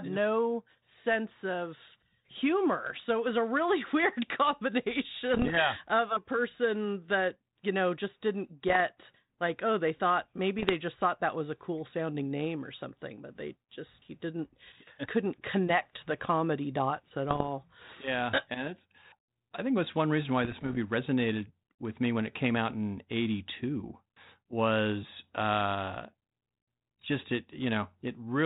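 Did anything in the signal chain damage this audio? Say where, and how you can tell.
Yes. Bit errors on an ADPCM link, at the transmission stage, hit the sound at 5.34–5.57, 8.68–8.81, 10.58–10.75, 17.29–17.45 and 20.42–20.77 s. Each flipped bit derails the decoder's step size and prediction, producing pops, rough bursts and brief level jumps that linger past the error.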